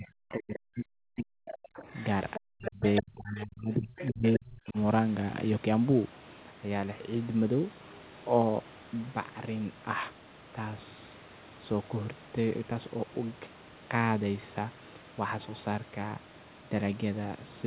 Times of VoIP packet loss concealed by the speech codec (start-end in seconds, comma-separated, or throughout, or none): none